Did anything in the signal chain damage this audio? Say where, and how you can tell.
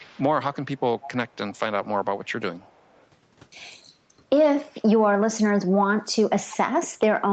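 Yes. There is an echo leak at the call-processing stage. A faint copy of the speech trails it by about 0.3 s at 0.0–0.23, 0.74–0.8, 1.02–1.09, 1.28–1.37, 1.53–1.59, 2.24–2.32 and 2.57–3.07 s. It sits some 20 to 40 dB down. The cause is likely an echo canceller letting loudspeaker pickup through.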